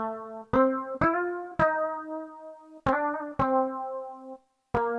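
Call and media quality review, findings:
Nothing stood out on listening, and no finding is raised against this clip.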